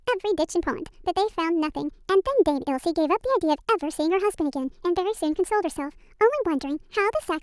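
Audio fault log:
Throughout: wrong sample rate. The speech runs 1.5 times too fast and sits about 7 semitones high, so it comes across chipmunky and rushed. Speed and pitch shift together by the same ratio, which points to audio captured at 16 kHz being played back at 24 kHz with no resampling. Every sample goes by faster than it should, and that squeezes both the timing and the pitch upward at once.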